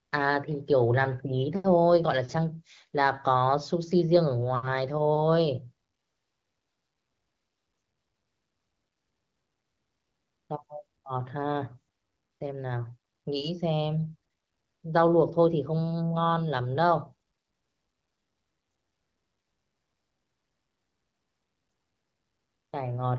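No faults are audible; the audio carries the upper band limit of AMR wideband (HD Voice) coding, consistent with a rate around 15.85 kbit/s.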